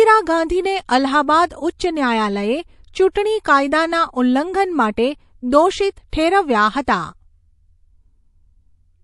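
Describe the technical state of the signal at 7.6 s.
At 7.6 s the speech sounds watery and swirly, with metallic chirping around s sounds, and this damage runs through the whole clip rather than appearing only at that moment. The likely cause is MP3 compression at a low bitrate, one that fits roughly 48 kbps. Short of bits, the encoder zeroes weak frequency lines that flicker on and off between frames.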